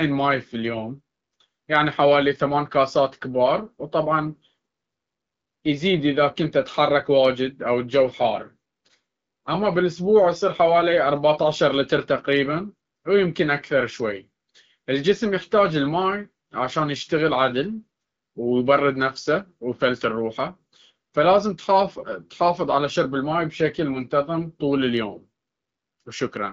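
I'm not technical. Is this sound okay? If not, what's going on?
Yes, nothing has gone wrong in this recording. It sounds like a clear HD Voice phone call, with the slightly narrowed top end you'd expect from a wideband mobile connection.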